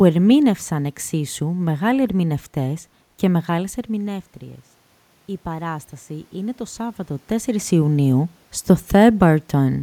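From 5.44 to 7.61 s the automatic gain control was rising: the level reaching it had fallen by about 13 dB, and it answered by slowly pushing its gain up by about 3 dB over roughly two seconds. Because the boost is applied to the whole signal, the speech and the room noise beneath it swell together, a gradual lift rather than a jump, and it only partly recovers the lost level.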